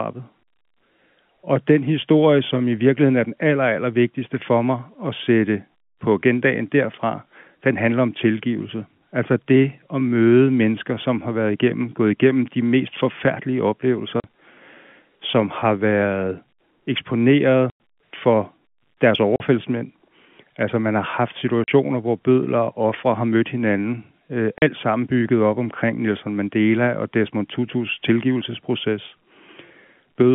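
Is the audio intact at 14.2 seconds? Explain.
No, there's a short dropout from 14.2 to 14.24 s, which is packet loss filled with silence. About 40 ms of the speech just vanishes, and that length fits two lost 20 ms packets. The receiver had nothing to play for that stretch, so it dropped in silence instead of patching over it. You hear a small hole with hard edges, sitting inside the narrow telephone-band sound of the line.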